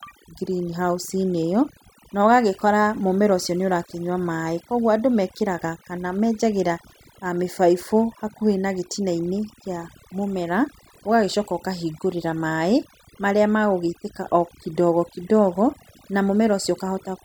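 From start to finish, overdone noise removal is at work: a noise reducer set far too hard pulls individual frequency bands down whenever they sit near its noise estimate, taking quieter parts of the speech with them. The background collapses to near silence flecked with twinkling specks.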